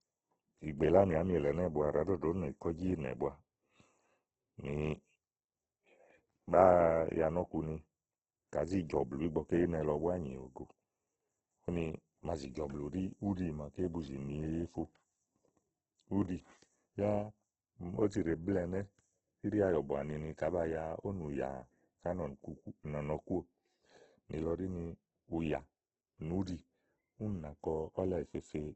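From start to finish the speech has nothing above 8.2 kHz and sounds rough and grainy, its bands filled with noise rather than emptied, so it lacks MP3's swirl. The likely cause is heavy Opus compression in CELT mode, fitting a rate near 12 kbps.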